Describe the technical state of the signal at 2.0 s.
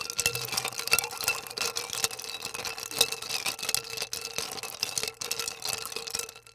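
At 2.0 s the sound comes through intact, with no audible fault at that point.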